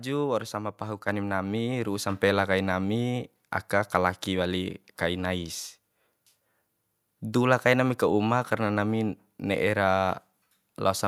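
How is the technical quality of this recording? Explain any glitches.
There is one glitch, a microphone volume step-up at 1.08 s, between "waur sama pahu" and "nami ru'u". The call software judged the input too quiet and raised the device's microphone gain in a single jump of about 5 dB, so voice and background suddenly become louder together.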